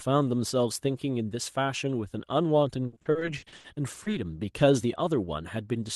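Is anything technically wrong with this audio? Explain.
Yes. From 2.87 to 4.15 s there is repeated packet loss: many short gaps, up to 50 ms, are patched by stretching the preceding sound, leaving the speech choppy and robotic.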